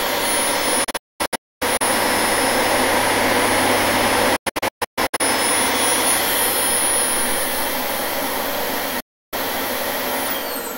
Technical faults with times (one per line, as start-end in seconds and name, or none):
0.84-1.81 digital broadcast dropout
4.36-5.21 digital broadcast dropout
9.00-9.33 digital broadcast dropout